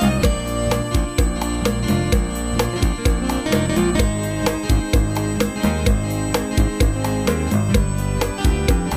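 A steady, fixed-pitch whine at 8 kHz runs under the whole clip, roughly 20 dB below the program. It's USB whine: the bus pulls current in 125-microsecond microframes, and that ripple leaks into the audio through shared power or ground. Mains hum would sit at 50 or 60 Hz and its harmonics, and a monitor's scan whine at its own line rate. This tone lands exactly on the 8 kHz microframe rate and does not drift.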